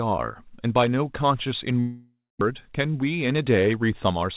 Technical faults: long network dropout; jitter buffer speed-up

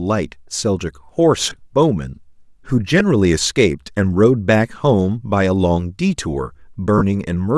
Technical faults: Bluetooth LC3 compression; lost LE Audio frames

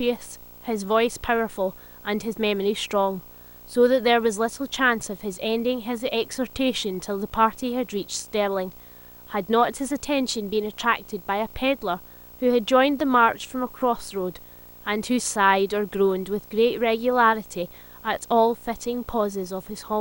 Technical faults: video or display buzz

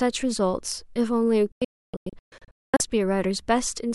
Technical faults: digital broadcast dropout

